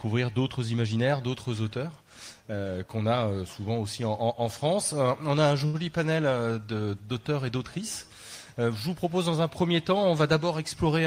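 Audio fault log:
5.65 to 5.83 s: short stall from a late packet. A packet arrived late, so the jitter buffer ran dry and the receiver stretched the last sound by about 86 ms before resuming where it left off. Nothing is lost, but that sound holds too long, with a slight buzz or dip.
10.52 to 11.01 s: jitter buffer speed-up. After a backlog built up, the receiver trimmed short pitch-period slices repeatedly to shrink the delay, removing roughly 50 ms. The sound plays about 9% faster at unchanged pitch, so this stretch feels hurried.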